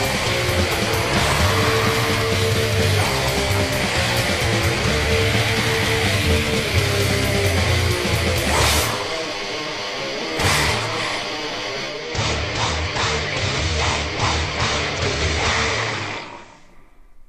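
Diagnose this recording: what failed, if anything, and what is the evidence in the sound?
The hybrid radio's receiver lost the digital stream at 11.81 s and cross-faded over about 294 ms to the station's FM analogue broadcast, returning to digital at 16.78 s. This is digital radio blending to analogue, a reception fault upstream of any converter. On FM the level drops by about 3 dB, and hiss rises to roughly 30 dB below the signal, then clears once the digital feed resumes.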